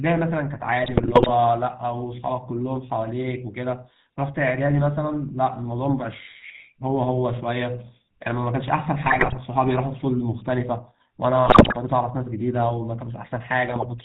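GSM full-rate codec damage runs throughout. The speech is rebuilt from a vocal-tract filter driven by sparse regular pulses, which fits 13 kbps coding, leaving a plainly buzzy, gravelly voice with nothing above 4 kHz. GSM bit errors strike at 0.82–1.31 s, 9.06–9.38 s, 11.46–11.75 s and 13.66–13.85 s. Corrupted filter, pitch or gain values distort frame after frame through each patch into squawks, pops and gargling bursts.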